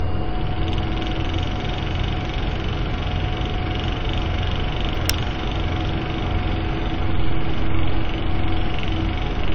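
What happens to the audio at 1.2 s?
Generation loss is present at 1.2 s, as it is across the whole clip. The sound is likely the result of repeated lossy coding, roughly ten passes, consistent with AAC-LC at around 96 kbit/s. Each decode and re-encode quantises on a shifted frame grid, so the errors stack up instead of cancelling. The audio comes across swirly, smeared and hollow, with softened attacks, even though content still reaches about 20.2 kHz.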